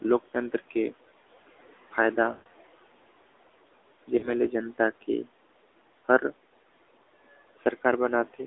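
Throughout the recording, noise suppressor artifacts are present. The suppressor pulls the steady background down by about 17 dB, frame by frame, so the noise floor drops in pauses and returns beneath the speech.

The whole clip also carries the sound of the AMR narrowband mobile codec. The line passes only 300 Hz to 3.6 kHz, and the damage is plainly audible: a buzzy, synthetic tint from the pulse-excited vocal-tract model. That level of coarseness fits the 10.2 kbps mode.

Lost AMR speech frames occur twice. From 2.32 to 2.47 s, about 140 ms drops out, which fits seven consecutive 20 ms frames. The decoder stretches the last good pitch and spectral shape while the gain falls, so the sound smears and fades toward silence before recovering rough. The second loss starts at 4.18 s and covers about 40 ms, consistent with two frames. It is heard as a short warbling dip within the span that ends at 4.47 s.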